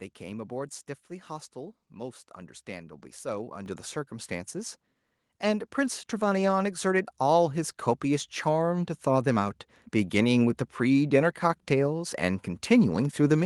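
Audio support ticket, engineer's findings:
Microphone volume stepped up at 3.66 s: speech and background noise jump together by about 9 dB in one step. Probable component: call software's automatic input gain, raising the device mic volume after judging the level too low.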